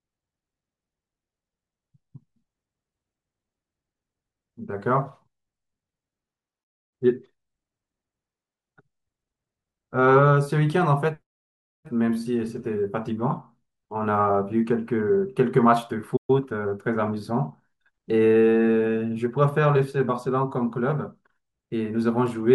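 A playback stall at 16.16 to 16.30 s cuts this speech clip to silence for about 120 ms, mid-flow, before it resumes where it stopped, most likely because the player's buffer ran dry or its output thread was briefly blocked. Time-compressed catch-up follows from 16.30 to 16.78 s. The player works off the backlog by removing short slices and cross-fading the joins, so the speech runs about 1.25 times fast at unchanged pitch.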